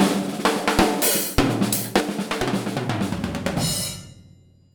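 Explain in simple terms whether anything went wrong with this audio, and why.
At 2.00 s the whole recording abruptly gets quieter and stays that way to the end. The sound and the background noise drop together in a single instant rather than fading down. That is a sudden gain jump, where the volume setting changed all at once. The likely cause is a level adjustment applied inside the system without a gradual ramp, so every later moment plays back clearly softer than the first two seconds.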